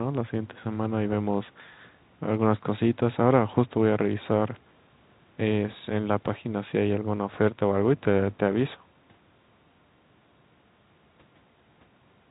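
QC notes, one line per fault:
Nothing to flag on this speech clip; it's ordinary G.711 mu-law telephone audio, capped at 4 kHz as that format always is, with nothing that calls for a note.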